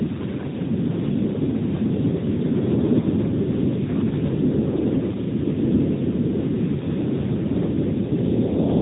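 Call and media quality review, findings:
Speech thin and muffled throughout, no content above 3.8 kHz; plainly audible buzzy, synthetic edge on voiced sounds. AMR narrowband mobile codec (AMR-NB): 8 kHz sampling, vocal-tract filter driven by sparse pulses per 5 ms subframe; damage fits the 10.2 kbps mode.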